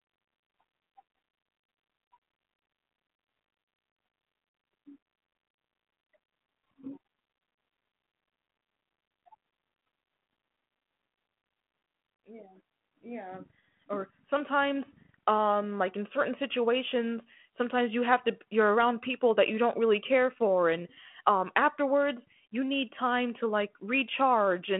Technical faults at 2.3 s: none

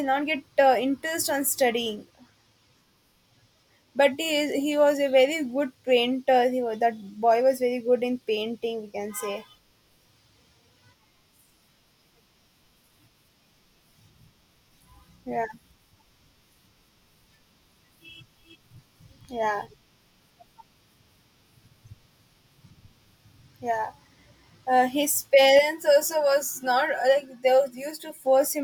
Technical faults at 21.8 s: none

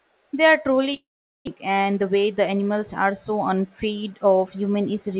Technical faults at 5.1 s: none

